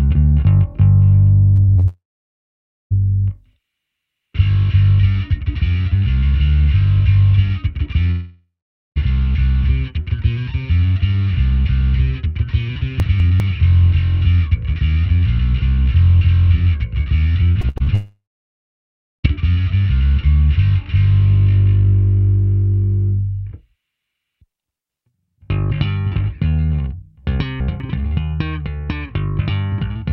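At 1.55 s and again from 1.63 to 1.70 s, the sound briefly smears. These are short concealed packet losses. About 20 ms and then about 40 ms of audio never arrived in time. The receiver patched each hole by extending the last sound, then blended back into the real signal. Each patch is heard as a quick smear or wobble, and a short sound inside a gap can disappear.

From 1.78 to 1.85 s comes a burst of packet loss. About 60 ms in a row went missing. The receiver stretched the last sound across the gap and turned it down as it went. This gives a brief held buzz or fading hiss. The audio then picks up further along, with that stretch gone.

Straight after, from 1.87 to 2.93 s, there is a long network dropout. About a second of audio is missing. A short fading continuation is heard first. Then roughly 0.9 s of silence follows. The cause is likely that no packets arrived for that whole stretch. 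The sound resumes further on, with the lost part skipped.

A second long dropout runs from 8.11 to 8.98 s. About 0.86 s is missing. The fading buzz or hiss lasts longer here, and about 0.45 s of silence follows. The audio then jumps ahead.

From 13.0 to 13.4 s, chunks play out of order. A 200 ms chunk arrived one chunk late and plays after the one that should follow it. Nothing is lost. The order is wrong, though. Three hard joins give a jumbled moment.

From 17.52 to 17.89 s the sound turns choppy. This is repeated packet loss. Five gaps fall close together, the longest about 68 ms. Nearly half of that span is patched audio. Pieces drop out.

Right after, from 17.95 to 19.26 s, comes the longest network dropout. About 1.3 s is missing. A brief fading tail is followed by roughly a second of silence. The sound then returns further on.

From 27.4 to 27.8 s, chunks are out of order again. A 200 ms chunk plays one chunk late. 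The result is the same scrambled moment.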